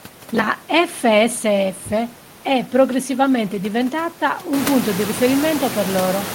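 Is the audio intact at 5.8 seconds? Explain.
Yes, the audio is intact at 5.8 seconds. The room's background noise sits about 11 dB below the speech there, and that noise belongs to the recording rather than to the system.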